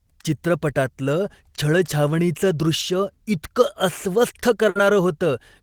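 At 4.69 s, near the end of the speech, a burst of packet loss interrupts the stream until 4.78 s. The receiver covers the hole by extending the last sound for about 60 ms while fading it down, then playback resumes with roughly 60 ms skipped.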